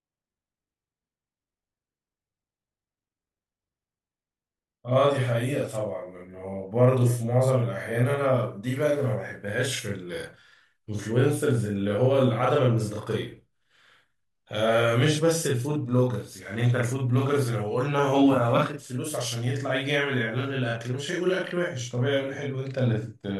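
Throughout the recording, the speech carries a channel delay (doubling). One channel runs 40 ms behind the other. When the two are summed to mono, the late copy sits apart at equal level. Every syllable sounds doubled, like a tight slap echo.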